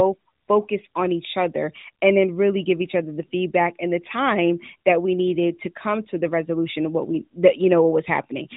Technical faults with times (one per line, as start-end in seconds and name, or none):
none